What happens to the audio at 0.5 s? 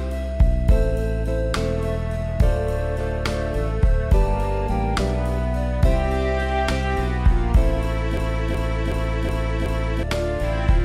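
Nothing goes wrong at 0.5 s; the audio plays through that moment intact, with no dropout, click or other fault.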